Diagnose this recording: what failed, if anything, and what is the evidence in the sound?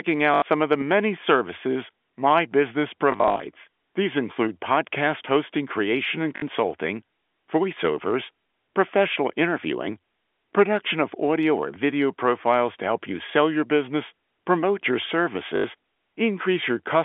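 The failure is in the network: packet loss with last packet repeated, so the receiver kept replaying the previous packet. You hear a short robotic stutter at 0.34–0.42 s, just before "some of the many", then a scattered patch over 3.12–3.4 s after "many services my business", then 6.36–6.42 s, and 15.56–15.64 s after "your business promote your". The repeats buzz at about 50 Hz, which fits 20 ms packets. The G.711 narrowband line underneath sounds as a phone line should.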